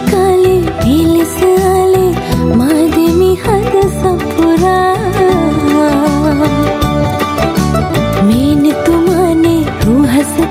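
From start to finish the level breathes with gain pumping: the level drops by around 10 dB as each loud sound arrives, so loud and quiet passages sit unnaturally close and the whole clip feels squashed. The likely cause is input gain set far too high, with a fast limiter clamping down on each peak. Unlike a noise gate, the background never cuts to silence; the level is pulled down rather than shut off.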